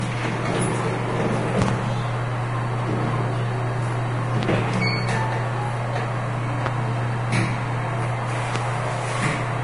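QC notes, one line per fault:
Throughout, Vorbis compression: heavy damage, nothing above 10.5 kHz, grainy hiss in the treble. This likely comes from low-bitrate Vorbis, around 30 kbps, quantising detail into noise.
1.62–1.71, 4.43–4.46, 6.66–6.69 and 8.56–8.59 s, loud pop: two pops at 1.62 s, single pops after. They sit about 20 dB above the sound, about 15 dB at 6.66 s, and are likely voltage steps.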